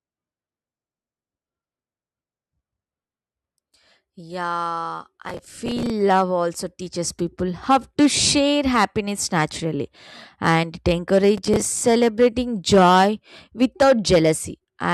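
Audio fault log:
5.23–5.90 s: processor overload crackle. A gritty burst rides on the speech for about two thirds of a second. It fits a processor falling behind on short buffers of around 5 ms and missing deadlines a few dozen times in a row. Each miss replays a scrap of old audio with hard edges, and the chain of those splices is heard as tearing.
11.38–11.82 s: processor overload crackle again, shorter. It fits roughly 15 missed buffers, each filled with stale audio, and it stops once the load passes.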